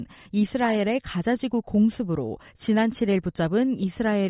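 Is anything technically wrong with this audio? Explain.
No, nothing technically wrong can be heard in this speech recording. There is no technical problem here to explain.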